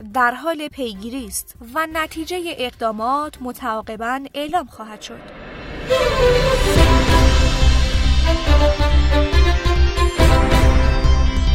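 No technical faults can be heard at any point in the audio.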